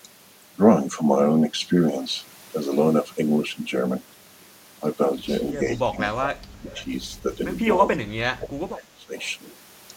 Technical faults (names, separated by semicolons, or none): speech suppressed in double talk; echo leak